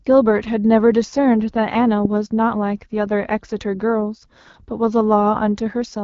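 A speech recording carrying the AMR wideband (HD Voice) codec across its whole length, with plainly audible damage: the voice sounds rough and raspy, which points to one of the codec's lowest modes, around 8.85 kbit/s. On a spectrogram, harmonics below 6.4 kHz look smeared, the 6.4 to 7 kHz band shows diffuse noise texture rather than harmonic detail, and nothing at all appears above about 7.4 kHz, a flat ceiling across the clip.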